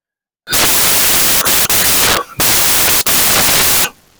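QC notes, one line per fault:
0.47 to 4.19 s, samples built from the wrong bytes: from just under half a second to the end, the speech is replaced by loud, harsh broadband noise. Each sample has been assembled from its bytes incorrectly, either offset by one byte or with the byte order reversed, so the rapidly fluctuating low-order bits land in the most significant position and dominate every value.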